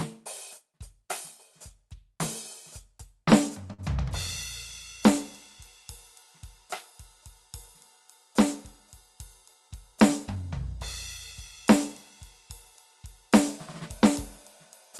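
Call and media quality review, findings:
Short stall from a late packet, 3.73–3.80 s in the music. One sound is held about 50 ms too long, with a slight buzz or dip. Jitter buffer ran dry, the receiver stretched the last audio, then resumed where it left off. Nothing is lost, just pushed 49 ms later. Call path audible as a top end that stops around 12 kHz, which fits Opus at roughly 32 kbps.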